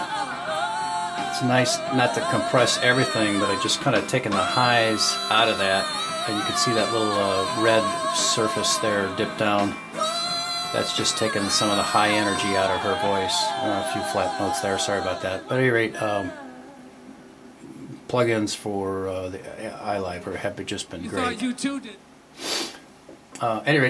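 No technical faults are audible anywhere here.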